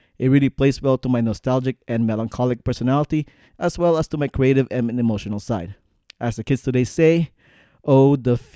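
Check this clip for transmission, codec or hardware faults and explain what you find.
No fault can be heard anywhere in this speech recording. There is nothing to list or explain.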